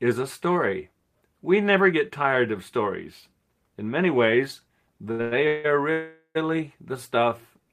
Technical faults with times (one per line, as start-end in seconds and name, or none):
5.11-5.21 short stall from a late packet
5.21-5.66 call audio freeze
5.92-6.37 call audio freeze
7.20-7.66 jitter buffer slow-down